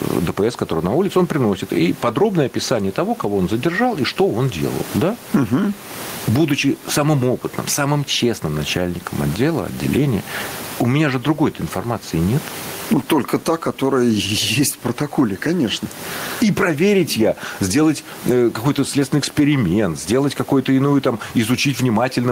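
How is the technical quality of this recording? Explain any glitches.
The recording has one fault that runs through the entire speech clip. Gain pumping, throughout: the input gain was likely set far too high, so a fast limiter pulls the level down on every loud sound, swinging it by around 20 dB. The room noise sits about 30 dB below the speech, and the speech is left squashed.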